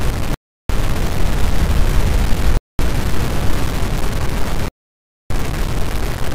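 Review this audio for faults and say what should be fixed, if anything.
Grainy, signal-following distortion runs through the whole recording. Quiet passages turn gritty and the softest parts sputter or vanish. This is likely low bit depth without dither: the sound appears truncated to about 4 bits, leaving error only around 15 dB below the signal. Keep at least 16-bit resolution and apply dither whenever reducing word length.

The sound cuts to silence three times: 0.34 to 0.70 s (353 ms), 2.57 to 2.79 s (221 ms), and 4.68 to 5.30 s (622 ms). Each time it resumes after the gap. These gaps are likely a Bluetooth stall, where interference held back packets until the headphone buffer ran empty. Reduce radio interference or use a larger receive buffer, or capture over a wired connection.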